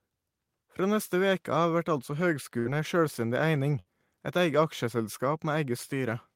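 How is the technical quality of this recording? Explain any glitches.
The recording has two short dropouts in the speech, both from a burst of packet loss. At 2.59 to 2.68 s, just after "vert altså", and again at 3.79 to 3.88 s, roughly 60 ms of packets never arrived in time. The receiver stretched the last sound across each gap while fading it, so it comes out as a brief buzz or hiss. The speech then jumps ahead with that 60 ms missing.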